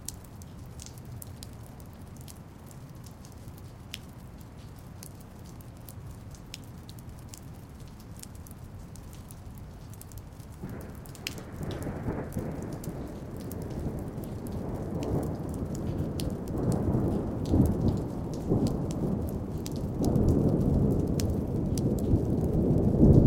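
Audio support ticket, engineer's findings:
No fault found in the sound recording. No action required on this ticket.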